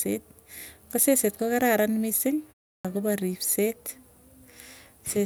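At 2.81 s, after a pause of about 0.36 s, the speech comes back abruptly out of silence with its opening sound missing, so the first word starts mid-onset rather than building up naturally. This is a clipped start after a pause: the output device dropped into a sleep state during the gap and needed about 36 ms to wake and lock again, swallowing the audio up to 2.85 s.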